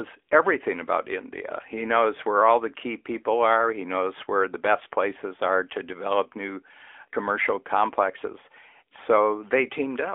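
Throughout, the speech runs through the AMR narrowband mobile codec. Only 300 Hz to 3.4 kHz survives, so it sounds thin. Each 20 ms frame is rebuilt from a vocal-tract model and a few pulses. The buzzy, synthetic edge is obvious and fits a mode near 10.2 kbps.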